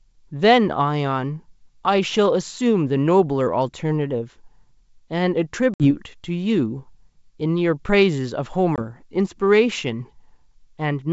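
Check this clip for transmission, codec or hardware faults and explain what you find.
Two hard-edged dropouts break the speech, at 5.74 to 5.91 s and 8.76 to 8.79 s, both from packet loss on an ADPCM call carried over G.722 at 64 kbit/s, whose wideband coding itself leaves at most a faint trace. In each, the sound cuts abruptly to silence and then returns slightly distorted, settling quickly. About 60 ms is missing in the first gap, a few packets' worth, and 20 ms in the second, roughly one packet. The lost audio was replaced by silence, and the receiving decoder's adaptive predictor and step size drifted from the sender's, briefly distorting the restart.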